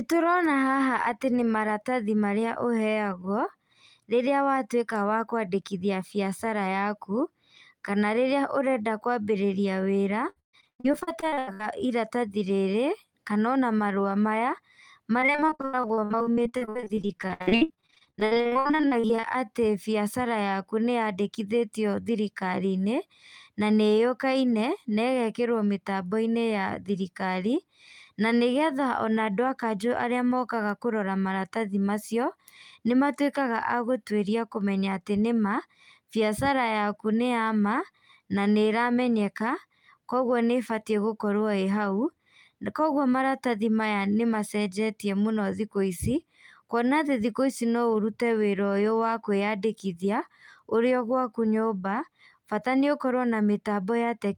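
From 10.29 to 11.61 s, repeated packet loss left holes covering about half the span, each patched by extending the last sound, so the speech turns choppy and robotic, with gaps up to 133 ms. It returns from 15.2 to 19.25 s, with shorter holes up to 81 ms. Overlapping its end, from 18.23 to 19.46 s just before "biacara yaku", a jitter buffer slow-down repeats pitch periods to rebuild its reserve. That adds 62 ms and plays the speech at 95% speed, audibly drawn out at unchanged pitch.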